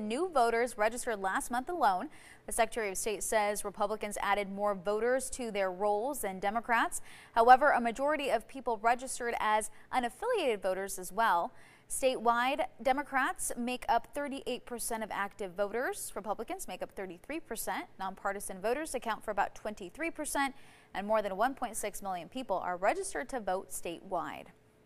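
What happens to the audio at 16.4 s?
Nothing goes wrong at 16.4 s; the audio plays through that moment intact, with no dropout, click or distortion.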